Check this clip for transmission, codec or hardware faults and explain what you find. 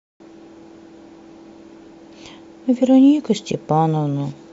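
One codec fault is present in this speech clip. At 2.81 s, compressed frames are skipped. A single frame, roughly 20 ms of audio, never reaches the output. The speech jumps forward by that amount.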